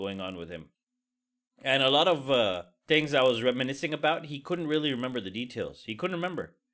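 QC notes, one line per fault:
throughout, resampler restarted on every block: converting each 20 ms block alone leaves an error at every block edge, heard as a 50 Hz buzz only under speech.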